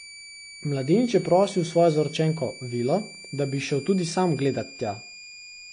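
From start to finish, a high whistle sits under the speech. It is a switching supply whistle. A switching power supply is running in an audible burst mode or beating against another supply. The tone lies between about 2.28 and 2.43 kHz. It lies roughly 20 dB below the speech.

The whole clip also has a hard ceiling. Nothing reaches above 9.8 kHz. This is low-bitrate audio saved at a high bitrate. The file is an MP3 at a generous rate, but the damage points to an earlier low-rate encode, likely AAC at around 32 kbit/s. Re-encoding kept the cut-off and artefacts and could not restore the lost detail.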